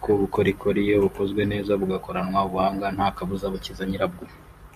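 Nothing in the speech stood out as a technical fault on listening.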